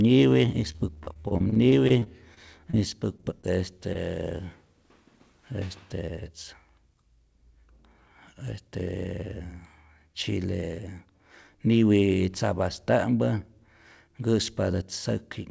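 From 0.72 to 2.75 s, repeated packet loss (robotic sound) chops the audio into a choppy patchwork. Gaps up to 31 ms are filled by repeating the last sound, which shows as smeared, striped spectrogram blocks.

Short concealed packet loss follows at 3.17–3.25 s, 3.41–3.45 s and 3.93–3.97 s. Each brief hole is patched and blended back, heard as a smear or wobble and seen as a small, smoothed waveform patch.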